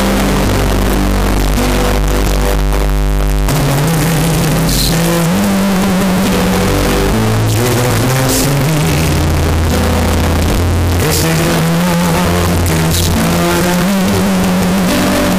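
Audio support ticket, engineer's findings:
Float read as integer, throughout. Very loud, harsh, near-square waveform sitting at an almost fixed, high level; background noise as loud as the main sound, though pitch stays traceable. Likely 32-bit float samples decoded as 32-bit integer, so sign and exponent bits set the level.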